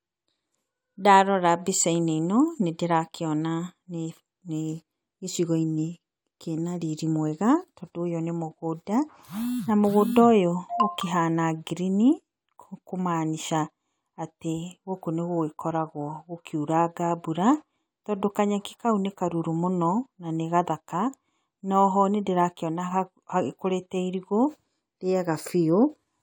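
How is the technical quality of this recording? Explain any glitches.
No glitches can be heard anywhere in the recording, and the signal stays technically intact throughout.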